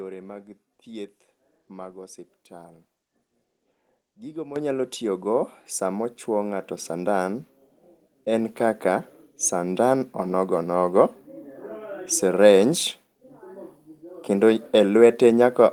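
Microphone volume stepped up at 4.56 s, just before "tiyogo samo chuwo", and again at 7.62 s. The calling software judged the input too quiet and raised the microphone's input volume in a single step. The first jump is about 10 dB, so speech and background noise both abruptly become much louder together. The second, about 2 dB, is a smaller lift that is harder to notice but still raises everything at once.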